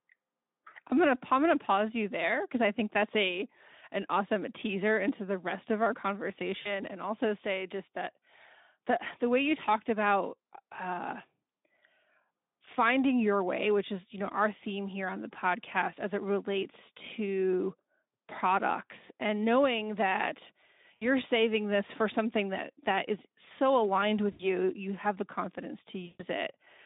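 VoIP packet loss concealed by the speech codec occurs at 6.61–6.79 s (just before "and also say just"), 20.96–21.08 s, 24.31–24.49 s (between "that is so aligned" and "you have the confidence"), and 26.05–26.24 s (after "you have the confidence"). Gaps of 40, 60, 80 and 140 ms are filled by extrapolating the last pitch and filter, giving a fading buzz or coloured noise. Unlike a dropout, the gaps are filled, and the sound stays weakened briefly after recovery.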